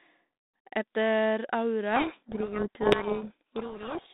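A speech clip over a narrowband telephone link, with light G.726 ADPCM coding at 32 kbit/s passing roughly 200 Hz to 3.7 kHz. From 1.96 s to the end, the speech sinks under harsh, grinding distortion. This is a codec payload misread: the G.726 code words arrive in the wrong bit order, so the decoder rebuilds nonsense samples.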